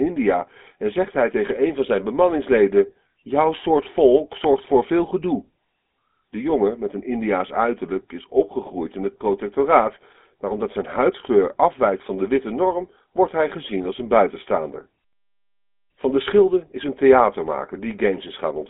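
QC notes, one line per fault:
Throughout, GSM full-rate codec: pulse-driven vocal-tract coding, fitting 13 kbps, makes the speech plainly buzzy and gravelly; the spectrogram shows a 250 Hz–3.5 kHz band, blank above 3.8 kHz.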